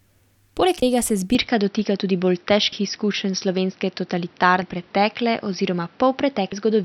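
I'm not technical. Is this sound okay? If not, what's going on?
No. There are two problems.

The first is audio missing between chunks. At 0.82, 2.72 and 6.52 seconds the sound skips. Each time, about a tenth of a second is cut out. The first skip comes just before "tega se". The likely cause is a recorder working in two-second pieces and dropping a moment at each join.

The second is an input switched to a poorer device. Just after "tega se", at 1.35 seconds, the sound turns duller and stays that way to the end. Nothing above 5.8 kHz gets through, and a faint new background noise appears. There is no gap at the switch, and the loudness hardly changes. The likely cause is the recording jumping to a lesser microphone or headset.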